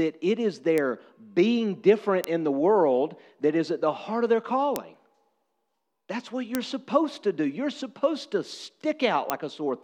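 Five bit error spikes tick through this speech: at 0.78 s, between "it is" and "being different in the"; at 2.24 s, between "being different" and "in the world that"; at 4.76 s; at 6.55 s, just before "supposed to do"; and at 9.30 s. Each is a single corrupted sample, a flipped bit that throws the value to about −4 dBFS (the first reaches about −10 dBFS) before it snaps straight back. Each sounds like a dry, broadband tick unrelated to the speech. Unlike a dropout or edit click, the waveform continues unchanged afterward, with no gap or discontinuity.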